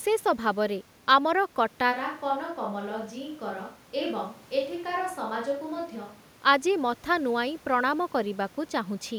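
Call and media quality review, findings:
Switch to a distant microphone, 1.94 to 6.44 s: speech abruptly goes roomy and hollow, thinner low end, around 5 dB quieter, room noise sitting roughly 30 dB under the voice. Likely the close mic's feed dropped and a far pickup like a camera mic got used. Snaps back at 6.44 s.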